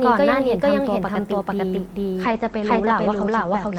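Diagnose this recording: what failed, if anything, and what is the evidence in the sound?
A doubled audio track runs throughout. An equally loud, dry copy trails the speech by roughly 0.4 s. The likely cause is a second, slower capture path.

A call bitrate drop hits the codec from 2.24 s to the end, 40 to 11 kbps. Speech turns rough and muffled as bandwidth falls from 20 kHz to 8 kHz.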